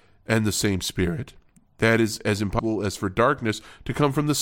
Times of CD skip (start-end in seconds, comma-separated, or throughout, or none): 2.59